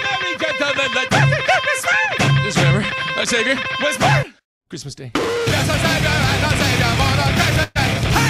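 Near the end, from 7.63 to 7.78 s, there is a burst of packet loss. A short run of packets never arrived in time to be played. The receiver filled the gap by stretching the last sound it had, for about 118 ms, and let it fade as the gap went on. That smeared stretch is audible as a held, thinning tail. When the audio picks up again, about 120 ms of sound has been skipped over. Nothing drops into silence.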